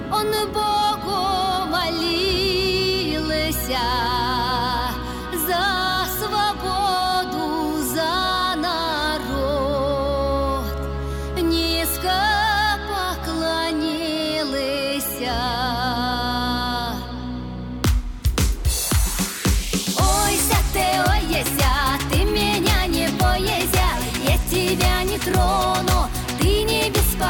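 No technical faults can be heard anywhere in this recording. Nothing interrupts or disturbs the sound.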